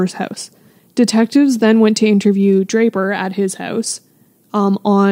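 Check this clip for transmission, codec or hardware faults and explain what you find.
Nothing stood out on listening to this speech recording.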